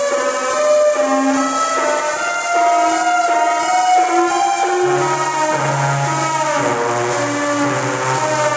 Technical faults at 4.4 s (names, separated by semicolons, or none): gain pumping